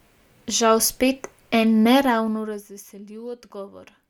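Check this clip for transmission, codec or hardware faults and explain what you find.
No faults detected here.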